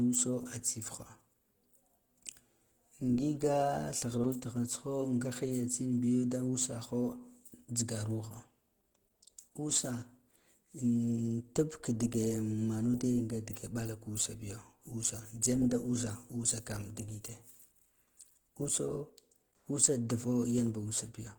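Speech with plainly audible damage throughout, likely from Opus compression in its hybrid mode, which fits a low bitrate around 16 kbps: the voice sounds hoarse, grainy and muffled. A spectrogram shows noise-filled upper bands instead of clean harmonics, extending to about 20.2 kHz.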